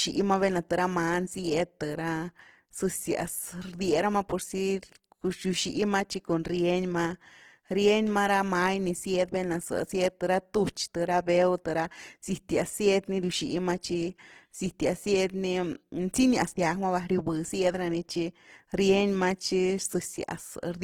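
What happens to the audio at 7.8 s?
At 7.8 s the speech carries the same Opus compression damage heard across the whole clip, so nothing new starts or stops there. Consonants and vowels sound rough, grainy and noisy rather than swirly or watery, with the texture plainly audible. The likely cause is a starved encoder in its music mode rebuilding thin bands from folded or noise-filled content, which fits a rate near 16 kbps. Unlike MP3 damage, the spectrum has few holes, and it still reaches about 20.2 kHz.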